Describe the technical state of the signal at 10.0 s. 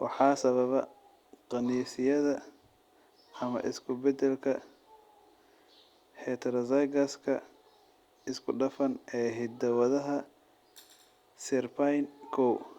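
At 10.0 s the speech signal is intact, with no audible fault at that moment.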